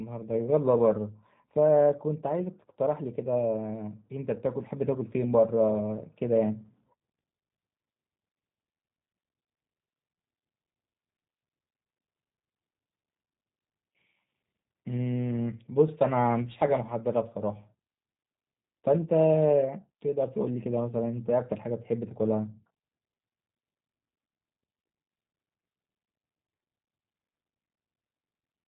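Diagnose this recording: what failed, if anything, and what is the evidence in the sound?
The codec stage: it's G.729 all the way through, with nothing above 3.8 kHz and a rough, synthetic edge that fits 8 kbit/s pulse-based speech coding.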